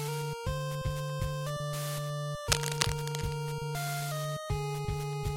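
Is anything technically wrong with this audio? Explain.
Yes. From 2.47 to 3.35 s there is cable scratch noise. Dense, uneven bursts of scratching and rustling sit over the sound, roughly as loud as the sound itself. The likely cause is a worn cable or connector being moved, so its contact resistance jumps rapidly.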